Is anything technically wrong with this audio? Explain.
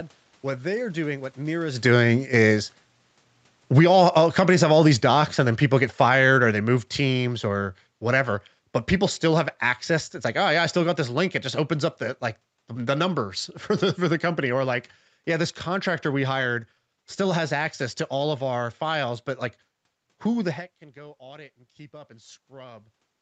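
Yes. Just after "they are doing what", from 1.7 s to 16.3 s, the speech and its background noise sink together by about 17 dB. This is automatic gain falling: the gain control judged the input too loud, or its background noise too strong, and slowly lowered its gain.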